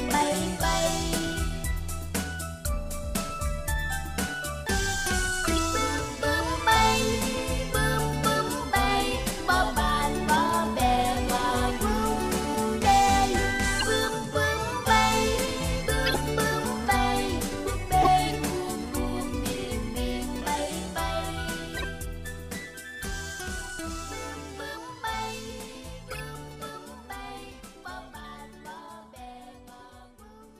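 Compressed frames arrived with flipped bits and the decoder played them regardless, so corrupt frame decoded occurs six times: 5.43–5.59 s, 13.79–13.87 s, 16.06–16.19 s, 18.02–18.07 s, 21.77–21.84 s and 26.07–26.21 s. Each run spans a handful of damaged frames, during which misread gains or codes place energy at the wrong frequencies. The result is a brief chirp, squeak, blip or noise burst lasting about as long as that run of frames.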